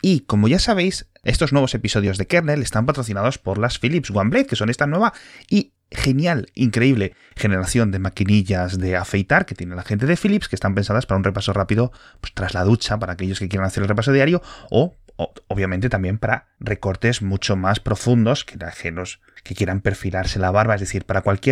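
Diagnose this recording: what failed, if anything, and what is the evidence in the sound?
A repeated buffer at the driver or buffer stage: at 2.07 s, just after "ya sabéis estos nuevos", a single click appears where a 1.45 ms block played twice, which fits a 64-sample buffer. Unlike a dropout, essentially no audio is lost; the sound is duplicated with a hard join.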